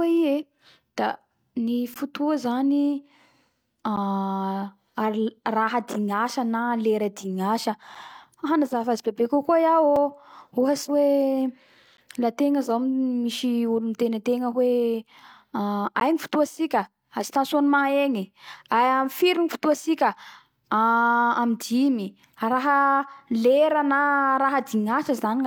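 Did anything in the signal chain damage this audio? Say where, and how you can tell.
Yes. The damage happened at playback, where a gap between stream segments was introduced. Short holes of silence with hard edges cut into the speech at 1.94, 3.96, 5.94, 7.95, 9.96, 11.97, 13.99 and 16.0 s. That includes just before "na lera dignasa", just after it, and just after "tegna zao misy olo". Each lasts 4 to 16 ms. They recur every 2 s, matching the segment length. Adjacent segments' time stamps don't quite meet, so the player pads the gap with silence. No audio is lost.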